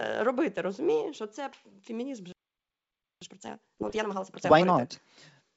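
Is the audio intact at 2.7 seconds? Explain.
No, 2.7 seconds falls inside a playback stall running from 2.32 to 3.21 s, just after "що це фемінізм же". The speech drops to silence for about 0.89 s and then picks up again, likely because the player ran short of data or its thread got blocked.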